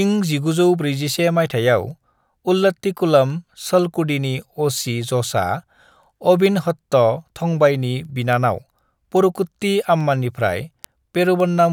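From 0.23 to 11.68 s, word clock ticks recur about every third of a second as unlocked clocks drift, each dropping or repeating one sample; they show as thin vertical spectrogram lines.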